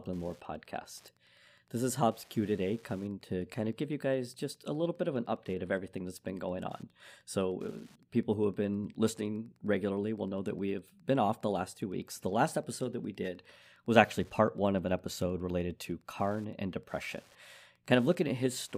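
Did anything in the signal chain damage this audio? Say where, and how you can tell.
Yes, Wi-Fi interference in the analogue wiring: a faint, steady ticking runs throughout the speech, about 35 dB below it, every 102.4 ms. A nearby radio's beacon is rectified by the circuit. Unlike GSM buzz, it ticks about ten times per second rather than buzzing.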